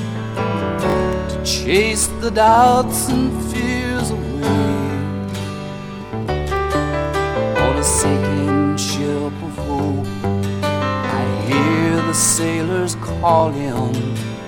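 A repeated buffer occurs at 0.9 to 0.94 s and at 6.06 to 6.1 s. A 20 ms piece plays twice more there. At 13.4 s it replays once. Fresh audio arrived late. Each repeat gives a brief stutter with hard joins. Nothing seems lost.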